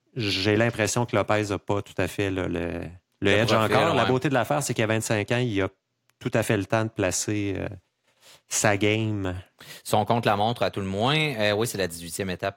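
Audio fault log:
No faults heard.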